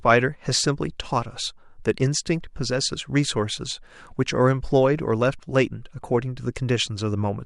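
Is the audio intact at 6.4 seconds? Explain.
Yes, the speech at 6.4 seconds is intact, with no audible fault at that moment.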